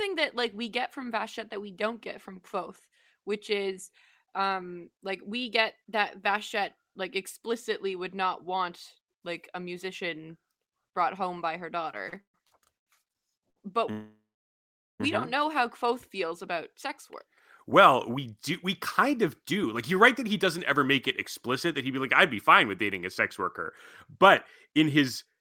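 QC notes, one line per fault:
12.09–12.88 s, repeated stalls (stutter): the speech drags and catches in five short holds, the longest 130 ms, as the jitter buffer kept running dry and the last sound was stretched.
13.50 s, short stall from a late packet: a sound is held about 67 ms too long with a slight buzz or dip, because one packet arrived late and the buffer emptied.
13.91–15.01 s, call audio freeze: the sound turns to a fading buzz or hiss, then about 0.8 s of silence, before resuming where it stopped; likely packets held up in transit draining the jitter buffer.
17.25–18.65 s and 19.06–20.85 s, jitter buffer speed-up: speech runs hurried at unchanged pitch, about 5–6% fast, as roughly a tenth of a second of pitch periods was trimmed each time to cut excess delay.
25.04–25.41 s, jitter buffer speed-up: the final stretch rushes about 8% fast at the same pitch, with a few tens of milliseconds of short pitch-period pieces dropped.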